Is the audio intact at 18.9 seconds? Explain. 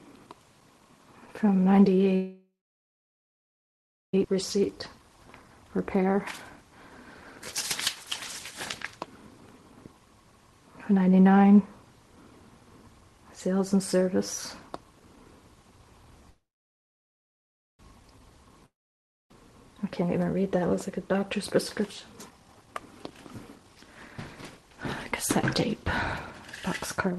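No. At 18.9 seconds the sound is gone: from 18.66 s the last bit of audio is drawn out into a buzz or hiss that fades, leaving about 0.6 s of silence before the audio resumes at 19.31 s, with roughly 0.64 s of material simply skipped. This is likely a long network dropout. No audio reached the receiver over that span, so it extended what it last had, let it die away, and then carried on without the lost part.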